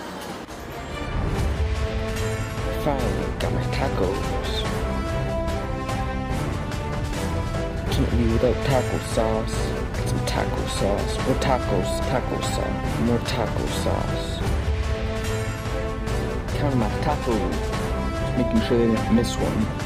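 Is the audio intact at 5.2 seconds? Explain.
Yes, the audio at 5.2 seconds is intact, with no audible fault at that moment.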